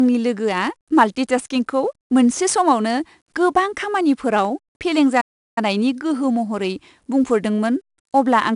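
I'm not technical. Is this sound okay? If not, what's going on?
No. The whole recording has 4-bit ADPCM compression. Each sample is stored as a small step from a guess, which leaves a gritty hiss riding on the louder speech and some roughness on sharp sounds.

There is also a playback stall from 5.20 s to 5.58 s. The speech cuts to silence for about a third of a second and then continues with "गोहो महरै". The player likely ran short of data or was briefly held up before recovering.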